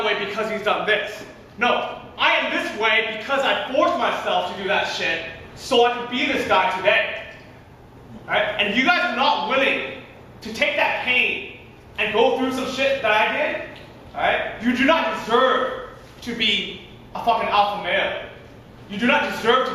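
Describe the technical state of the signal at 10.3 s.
At 10.3 s the signal is intact, with no dropout, distortion or other audible fault at that moment.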